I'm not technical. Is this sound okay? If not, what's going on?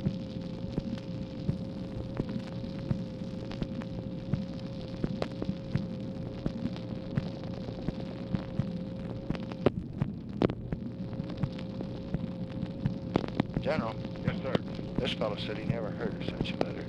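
Yes, this sound is okay, with nothing going wrong anywhere in the clip. There are no dropouts, glitches or other technical problems to point to at any moment.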